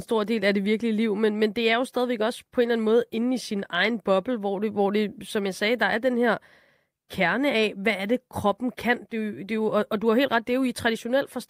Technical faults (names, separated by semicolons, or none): none